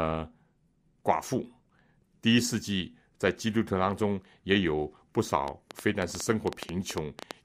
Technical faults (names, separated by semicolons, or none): train of clicks